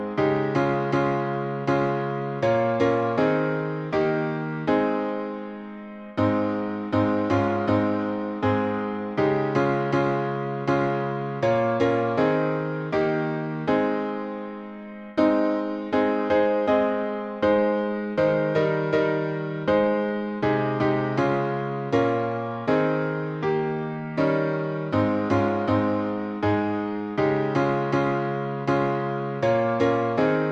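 No technical faults occur at any point in the clip, so there is nothing to describe in time order.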